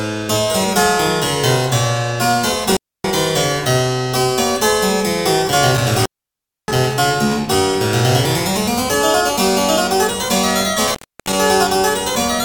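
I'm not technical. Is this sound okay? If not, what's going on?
No. A loose cable or plug, an intermittent contact, briefly lost its connection three times: 2.72–3.09 s, 5.77–6.97 s and 10.87–11.34 s. Each time the sound crackles, then drops out for about a quarter to two-thirds of a second, leaving faint hiss.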